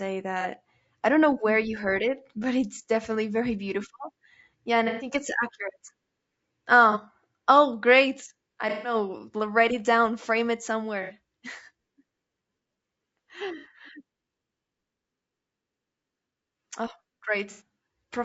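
Throughout the speech, the signal has been squeezed through a short-frame, low-delay coder, likely low-delay AAC compression of the AAC-ELD type used in video calls, at a bitrate that sounds near 32 kbps. At a bitrate that low, the coder cannot code the voice cleanly, so the damage is plainly audible. The voice turns rough and grainy, noise fills the gaps between harmonics, and the top band sounds thin and synthetic.

On top of that, AAC frame loss with concealment occurs seven times. The decoder rebuilds each missing stretch from the last good spectrum:

0.41–0.46 s, just before "I don't know where", a brief noisy smear.
4.88–5.09 s, about 120 ms ending right before "it's accurate", a longer washed, phasey patch.
6.92–6.97 s, a short blur.
8.69–8.95 s, just after "great I", the longest gap at about 150 ms, where the sound smears and sags.
11.03–11.12 s and 13.58–13.66 s, two 60 ms grainy patches.
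17.51–17.62 s, a 90 ms phasey smear.

The shortest gaps fit the loss of a single 30 ms frame.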